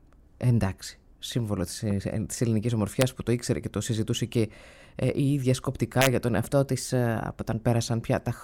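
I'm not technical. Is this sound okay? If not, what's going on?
No. At 1.91 to 1.93 s there is a loud pop, a single sharp thump that stands out clearly above the sound, which carries on underneath it. It is likely an electrical jolt from a plug, a switch, static or a driver hiccup.

At 3.01 s, and again from 6.02 to 6.07 s, there are harsh, violent cracks. This is integer overflow: the loudest moments went past the largest number the system can store and wrapped to the opposite extreme instead of being capped, which sounds far rougher than ordinary distortion.

From 6.42 to 7.65 s the sound suddenly plays about 5.6% faster and almost a semitone higher, then snaps back to normal. This is likely a drift correction step, where software keeping two clocks in sync nudged the playback speed in one jump.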